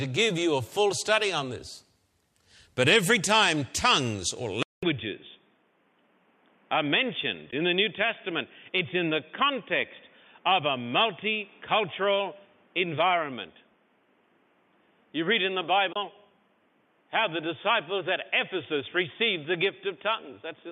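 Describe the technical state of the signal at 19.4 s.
At 19.4 s the speech sounds narrow and boxy, with nothing above 3.6 kHz. This state runs from 4.63 s to the end of the clip. It began after a 200 ms silence at 4.63 s. The likely cause is an input switched to a poorer device, such as another microphone or a headset call profile. That device passes a narrower band. It brings a faint new noise floor well below the speech, and the level drops by several decibels.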